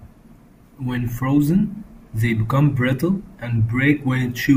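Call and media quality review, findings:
No audible faults found.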